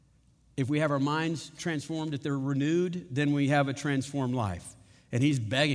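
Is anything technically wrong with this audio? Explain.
No, the speech recording shows no technical faults in its level, timing or signal path.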